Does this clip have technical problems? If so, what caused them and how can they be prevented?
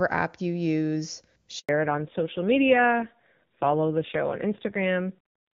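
Yes. At 1.59 s the speech cuts out and stays silent for 100 ms, until 1.69 s. This is a handover gap: the phone switched the call to another network, no speech frames arrived during the switch, and whatever was said then is lost. Keeping the handset on one stable network, or using make-before-break handover, prevents it.

From 1.69 s to the end the speech turns duller and rougher, with nothing above 4 kHz, whereas before the gap the HD Voice (AMR wideband) speech is clear. This is a fallback to narrowband: the call dropped from AMR-WB to the older AMR-NB codec, and the roughness points to a low rate of about 5.9 kbit/s. Making sure both networks support HD Voice end to end prevents it.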